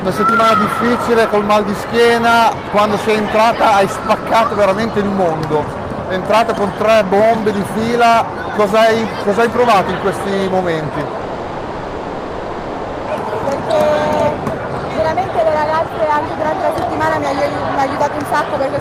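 At 11.21 s the audio cuts out until 13.09 s, and what fills that stretch is a smeared continuation of the last sound, a fading buzz rather than true silence. That's likely a long network dropout, with about 1.9 s of audio simply lost before playback resumes.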